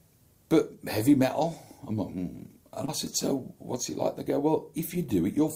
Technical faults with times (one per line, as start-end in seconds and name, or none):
2.85-2.89 short concealed packet loss